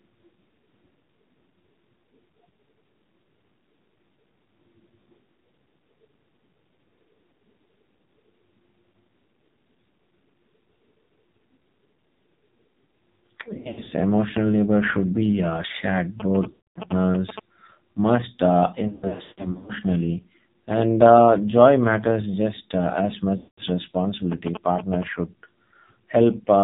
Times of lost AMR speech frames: 13.54-13.92, 16.50-16.91, 18.88-19.72, 23.38-23.62

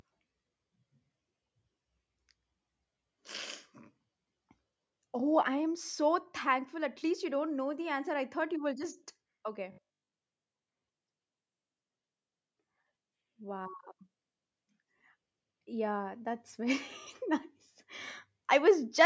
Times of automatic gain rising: 6.73-8.90

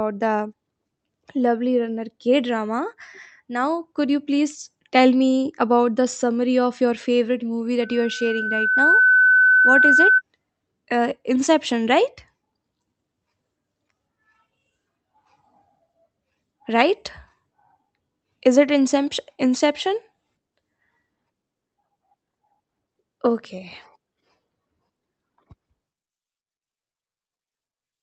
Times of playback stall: none

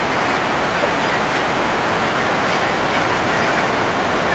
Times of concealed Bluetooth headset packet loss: none

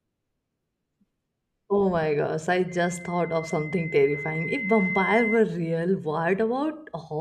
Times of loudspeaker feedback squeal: 2.68-5.43

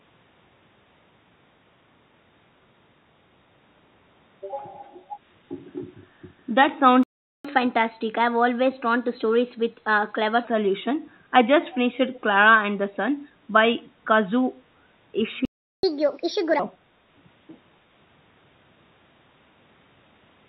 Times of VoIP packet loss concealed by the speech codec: none

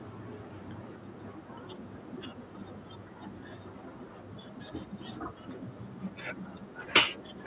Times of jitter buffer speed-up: none

